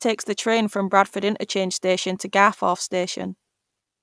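Nothing in the speech stood out as a technical problem on listening.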